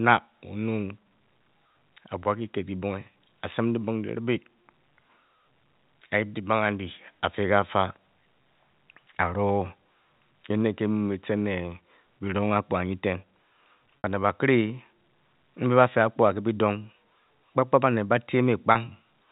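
At 14.01 to 14.04 s and again at 18.72 to 18.75 s, packet loss with pitch repetition: the receiver bridges each gap by replaying the last pitch period, fading it out over about 50 ms. The first covers about 60 ms, which fits two lost packets, so it fades into silence before the speech returns with a short cross-fade, and the second, about 30 ms, gives a brief held, buzzy note.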